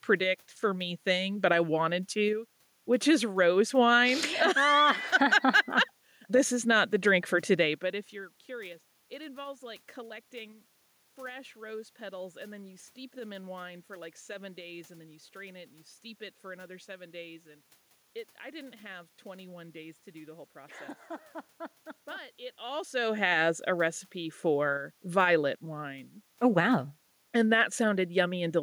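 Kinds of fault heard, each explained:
Nothing stood out on listening; the level shifts around 7.5 and 22.5 seconds sound like the talker moving relative to the microphone, and the background noise of the room is part of the recording itself.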